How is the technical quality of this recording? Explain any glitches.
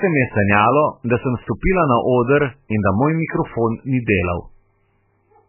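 Poor: the speech sounds muffled and watery throughout, with nothing above 3 kHz and a swirling, warbling texture. That points to heavy MP3 compression, likely at a very low bitrate around 8 kbps, where the encoder cuts the treble and lets weak frequency components flicker on and off.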